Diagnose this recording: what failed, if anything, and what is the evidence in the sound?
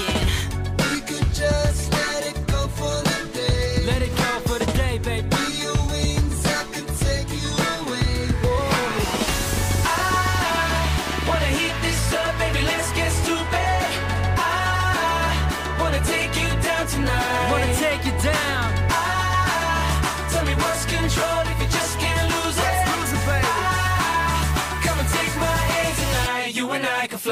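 A train of clicks runs from 8.45 to 11.35 s: around thirty sharp, near-identical ticks at about 11 per second, spaced unevenly and peaking roughly 5 dB above the surrounding sound, so they stand out over quiet passages too. The uniform shape and uneven pacing point to an external pulse source injecting into the chain, likely interference coupling into the analogue wiring or a faulty connection or power supply, rather than anything in the recorded material.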